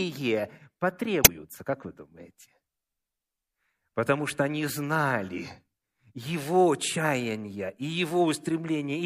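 Right around 1.22 to 1.29 s there's a short glitch, about 70 ms long, from damaged data in the compressed stream. Some of the data got mangled, so the decoder misread those frames and lost sync until it found the next clean frame header.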